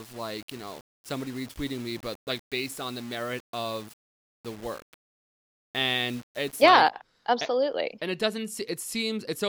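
From 0.0 to 6.64 s the speech has low bit depth without dither, likely from plain rounding to what sounds like 7 bits. The error tracks the signal, so grainy distortion sits about 25 dB down and quiet parts turn gritty. Waveforms show stair-steps; spectrograms show broadband grit only during sound.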